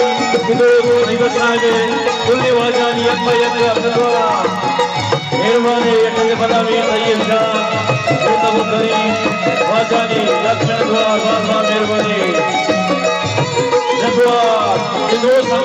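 A steady buzz of ticks at 25 per second sits under the sound for the whole clip, present only while there is signal. This is a resampler restarted on every block: the audio was converted in 40 ms blocks, each processed in isolation, which fits an upsampling from 16 kHz to 48 kHz. At each block edge the converter lacked the true neighbouring samples, leaving a small error every 40 ms that repeats as the tick train.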